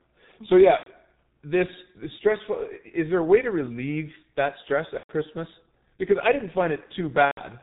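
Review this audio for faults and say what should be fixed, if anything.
Muffled, hoarse speech runs through the whole clip, with nothing above 4 kHz and consonants smeared together. That is heavy G.723.1 codec damage: the codec works in 30 ms frames and rebuilds the voice from a coarse model that updates slowly, so fast detail is lost. The thin, rough texture fits its 6.3 kbit/s mode. To prevent it, carry the call on a wideband codec at a higher bitrate.

At 0.77 to 0.88 s, 4.97 to 5.11 s (just after "to relieve that stress") and 7.25 to 7.41 s, the sound stretches into a buzzy tone or a coloured noise that fades, and stays weak for a moment afterwards. This is VoIP packet loss concealed by the speech codec. The decoder filled about 90 ms, then about 120 ms twice, by repeating its last pitch and filter at falling gain, which fits runs of three and four lost 30 ms frames. Use jitter buffering and forward error correction or redundancy on the network path to prevent it.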